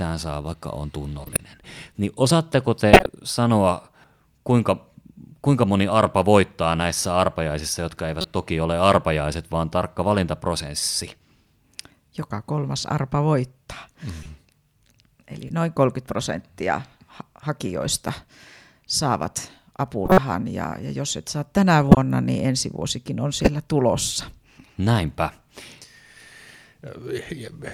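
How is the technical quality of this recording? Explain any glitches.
Corrupted compressed frames were decoded and played throughout the speech, at 1.23–1.40 s, 2.93–3.06 s after "niin osaatteko", 8.19–8.25 s between "voittaa näissä arpajaisissa jotka" and "toki ole arpajaiset vaan", 14.23–14.26 s, 15.47–15.51 s, 20.05–20.18 s, 21.89–21.97 s, and 23.35–23.48 s after "niin ensi vuosikin on". In each case the decoder accepted frames with flipped bits, misreading gains and spectral codes for one to several frames. This produces corrupt-frame-decoded chirps and noise bursts. The bursts at 1.23, 2.93, 20.05 and 21.89 s are the loudest. The one at 23.35 s is nearly as loud, the one at 8.19 s is moderate, and those at 14.23 and 15.47 s are fainter blips.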